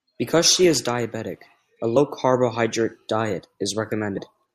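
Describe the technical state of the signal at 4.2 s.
Around 4.17 s the decoder drops compressed frames: a couple of whole frames, each about 24 ms long, never reach the output, either missing from the stream or rejected as corrupt. Playback jumps forward by roughly 50 ms of speech, so the sound lurches ahead a little. The join comes out as a brief glitch in the flow.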